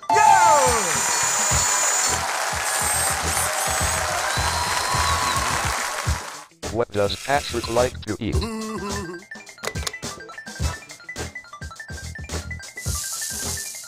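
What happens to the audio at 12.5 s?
Nothing goes wrong at 12.5 s, and the audio plays through that moment intact, with no dropout, click or distortion.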